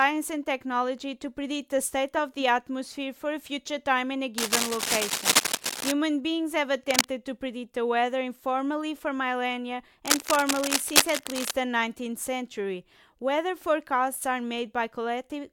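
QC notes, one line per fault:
4.38–5.92 s, 6.83–7.05 s and 10.06–11.51 s, cable scratch noise: dense, irregular crackling and rustling sits over the speech, roughly as loud as the speech itself, in a long burst of about 1.5 s, a brief one of about 0.2 s, and another of about 1.5 s. The uneven, gritty texture likely comes from a worn cable or connector being moved, with its contact resistance jumping rapidly and injecting bursts of noise into the signal.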